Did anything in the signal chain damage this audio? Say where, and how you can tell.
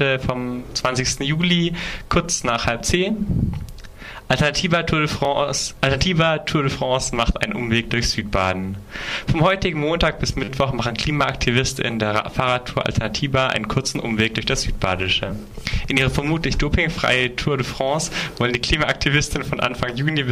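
Yes, at the driver or buffer stage: a repeated buffer. At 5.25 s a tiny slice plays twice with a hard join, heard as a click. From 10.44 to 10.48 s it plays five times, a brief buzz. The repeat period fits a 10 ms buffer replayed because new samples arrived late.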